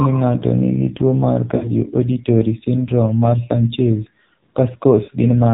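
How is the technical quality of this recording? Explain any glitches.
The technical quality is poor. The speech has passed through a heavily compressed mobile link and has two short dropouts.

Throughout the clip, the AMR narrowband mobile codec shapes the whole sound. AMR-NB models the vocal tract and excites it with a handful of pulses per subframe. The heavy damage here points to a low mode around 5.9 kbps, so the speech sounds buzzy and synthetic. On a spectrogram, everything stops sharply at 4 kHz and the harmonics look smeared.

From 1.56 to 1.72 s and again from 5.04 to 5.10 s, there are lost AMR speech frames. When frames fail, the decoder repeats its last good pitch and filter settings at falling gain. About 60 ms is missing in the first gap, which fits three 20 ms frames, and about 40 ms in the second. Each gap sounds like a brief drawn-out warble sinking into a dip before the speech returns roughly. 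On a waveform, the envelope tapers, and a spectrogram shows frozen, fading bands.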